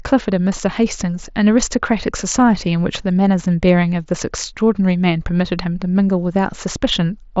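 No technical faults are audible.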